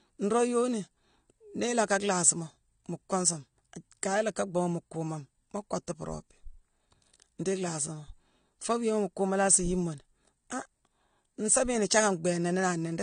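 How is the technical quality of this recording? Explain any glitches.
The technical quality is limited by one fault that runs through the whole recording. From start to finish the speech sounds dull and warbly, with fizzy sibilants, most likely from AAC compression at a low bitrate, which fits about 32 kbps AAC-LC. The encoder quantises each frame's frequency lines coarsely and discards everything above 9.7 kHz. A spectrogram would show a hard ceiling there and patchy, holed upper bands. The waveform looks normal.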